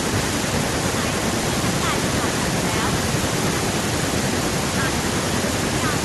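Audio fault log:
No faults heard anywhere in this speech clip.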